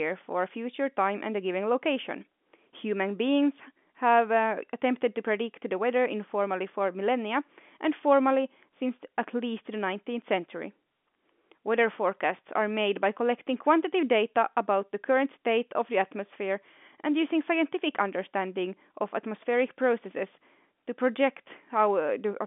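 No technical faults occur in this speech, which carries the narrow band of an ordinary telephone line, with nothing above about 3.8 kHz.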